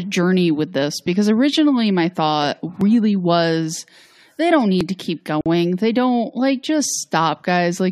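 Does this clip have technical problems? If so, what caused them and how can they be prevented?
Yes. There are tiny skips at 2.81 s (after "because originally my thought"), 4.81 s (after "was they don't") and 6.85 s (after "don't like"). That's audio missing between chunks, every 2 s, a few milliseconds each. It's likely the recorder dropping samples at each chunk handover. Overlap or double-buffer the chunks so nothing falls out.

At 5.41 to 5.46 s there's a sudden 50 ms hole of silence, a gap at a join of encoded pieces. The encoder's start-up delay and end padding were left in where two separately encoded pieces meet. Trim that priming and padding, or encode the whole thing in one pass.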